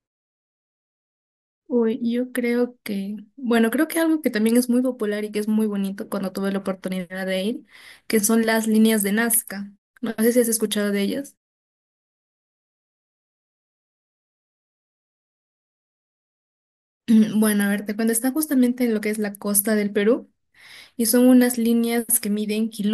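No technical faults can be heard anywhere in this speech. Where the talker pauses, the background fades down to silence and comes back in time for the next sound, and none of the speech is lost around those gaps.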